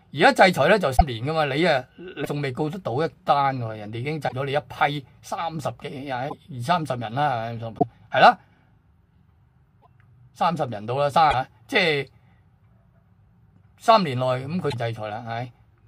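Eight short faults break the sound at 0.96, 2.24, 4.27, 6.28, 7.77, 9.81, 11.30 and 14.70 s. Each lasts 40 to 58 ms, about two MP3 frames of 26.1 ms. The audio skips forward, and the next moment comes out garbled before it settles. This is likely a broken MP3 bit reservoir. Frames were lost, and the following frame reached back for borrowed data that was no longer there.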